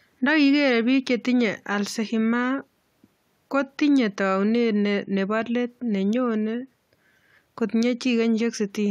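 Listening to the speech recording, nothing technical stood out.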